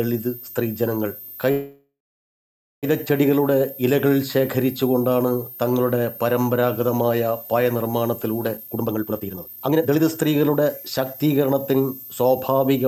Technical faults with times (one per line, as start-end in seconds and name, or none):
0.00-12.87 switching supply whistle
1.51-2.85 call audio freeze
8.57-11.76 jitter buffer speed-up